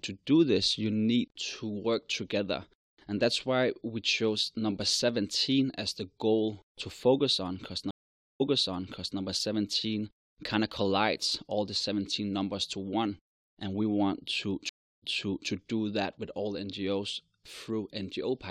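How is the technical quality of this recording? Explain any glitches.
The speech recording has two stream reconnect glitches. At 7.91 s, after "to focus on cuz", the audio drops out for about 0.49 s. It then resumes about 0.79 s earlier, repeating a stretch. At 14.69 s, after "and we want to", there is a 0.33 s gap. Playback jumps back 0.46 s before "do that with". Each time, the connection broke, the player reconnected and restarted its decoder, and the server resent a burst of already-played audio.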